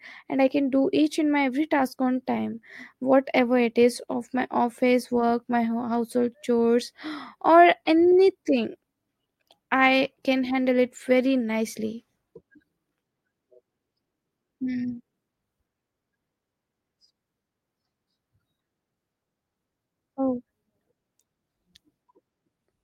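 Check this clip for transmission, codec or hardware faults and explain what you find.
The speech has a transmission timing fault: the two ends run on mismatched clocks, and the receiver keeps correcting for it.

Clock drift between sender and receiver runs through the whole clip. The sender's clock runs around five percent fast, so the receiver's jitter buffer keeps overfilling. The result is small, unevenly spaced timing hiccups rather than the regular beat of a fixed buffer underrun.

Repeated timing corrections run from 0.23 s to 22.83 s, applied at a rate of 105%. The receiver trims short slices to keep pace with the faster sender. Every edit removes material, none repeats it, so the speech sounds slightly rushed and unsteady, not stuttering as with packet-loss concealment.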